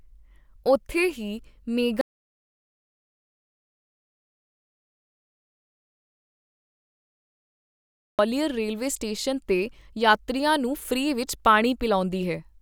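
The input feed was likely lost from 2.01 s to 8.19 s while recording carried on writing silence, an audio dropout to silence. The speech cuts off abruptly, leaving about 6.2 s of dead silence with no room tone, then resumes mid-flow.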